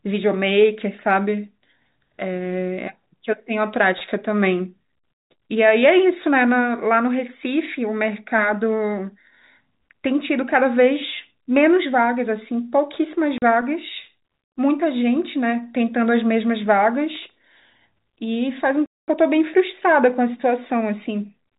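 At 13.38 s the speech drops out for 40 ms, and from 18.86 to 19.08 s for 220 ms, each hole hard-edged. This is packet loss filled with silence: lost packets were replaced by nothing, and both gaps fit 20 ms packets.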